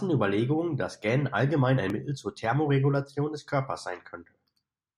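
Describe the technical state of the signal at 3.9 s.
At 3.89 s the speech jumps forward: a tiny sliver of sound, about 10 ms, is missing, and the audio on either side is butted together with no gap of silence, so it comes across as a brief skip in the flow. The likely cause is audio missing between chunks. The recording was handled in blocks of 2.0 s, and a short piece was lost at the changeover from one block to the next before the two edges were spliced directly together.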